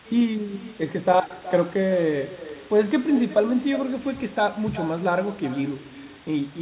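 From start to finish, every phrase of the speech is trailed by a fainter, hollow copy arriving roughly four tenths of a second later, sitting about 17 dB below the original. That is echo with no canceller: the far end plays the call through a loudspeaker, its microphone picks it up, and nothing strips it out, so the sound returns after the network round trip. The copy shares the narrow telephone band, with nothing above 4 kHz, which fits a G.711 call path.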